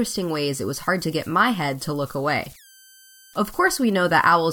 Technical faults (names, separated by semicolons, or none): converter idle tones